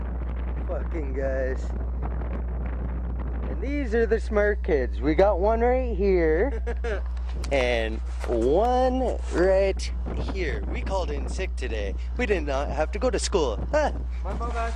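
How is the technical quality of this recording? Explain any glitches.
The recording is marred by mains hum running through the whole clip. A steady 60 Hz tone with low harmonics sits roughly as loud as the programme itself, pointing to a ground loop or nearby transformer. Unlike rumble or wind, it keeps an exact, unwavering pitch.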